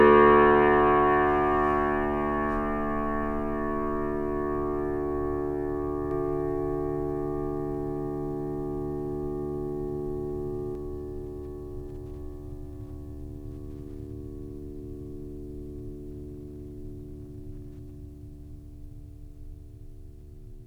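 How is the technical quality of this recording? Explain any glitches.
The music has one glitch. From 6.11 to 10.75 s there's a doubled audio track: a second copy sits about a second and a half behind, a few dB quieter, kicking in and cutting out abruptly, likely from a slower capture path or a misaligned edit.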